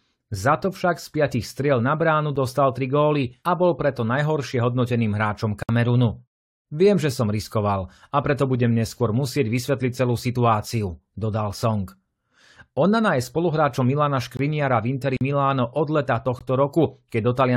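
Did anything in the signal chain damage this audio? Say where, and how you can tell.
Yes, two kinds of damage, both in the delivery path rather than the recording.

There are three gaps between stream segments, at the playback stage: at 2.36 s, between "striel na bránu" and "tri góly a bol", then at 14.37–14.39 s and 16.39–16.41 s. Each is a hard-edged hole of about 9, 22 and 19 ms. They sit on 2-second segment boundaries, where the timestamps don't quite meet and the player pads the difference with silence. Nothing is actually missing from the speech.

There are also two blocks of digital silence, which point to the driver or buffer stage: 60 ms at 5.63–5.69 s, right after "preto najhoršie hodnoteným hráčom", and about 45 ms at 15.17–15.21 s. The sound drops straight to zero and comes back with no fade. That fits an output buffer that wasn't filled in time and went out as zeros.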